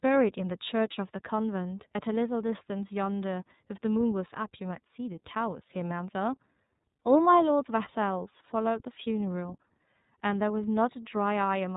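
From start to finish the speech carries the iLBC codec. Nothing above 4 kHz survives, and a plainly audible rough, slightly synthetic grain points to 30 ms frames near 13.3 kbps, each coded independently. A plain band-limit would sound dull but smooth, not grainy.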